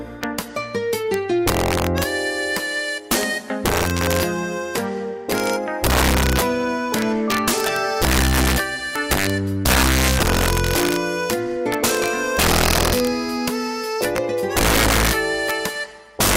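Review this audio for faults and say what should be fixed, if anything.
Integer overflow runs throughout the clip: the loudest peaks crack violently instead of flattening. The signal is driven about 6 dB past the integer limit, and roughly two percent of samples exceed it. Each of those wraps to the opposite sign, jumping across the full range in a single sample, which is far harsher than ordinary clipping. To prevent it, reduce gain before the integer stage and use saturating arithmetic so overshoots are limited, not wrapped.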